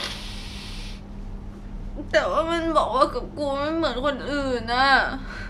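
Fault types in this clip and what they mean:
No technical fault can be heard in this speech recording. There is nothing here that needs a line of its own.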